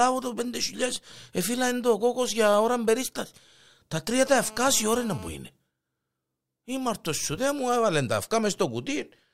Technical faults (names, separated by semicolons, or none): GSM phone buzz